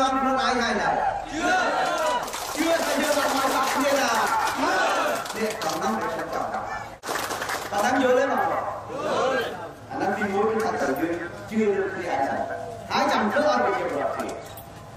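At 10.8 to 10.88 s, a 20 ms chunk of audio arrives three chunks late and plays after the material that should follow it, so the chunks are out of order. Nothing goes missing, but the three hard joins give a brief jumbled stutter.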